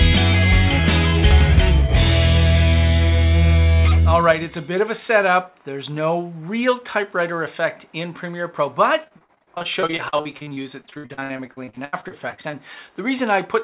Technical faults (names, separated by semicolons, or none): repeated packet loss (robotic sound)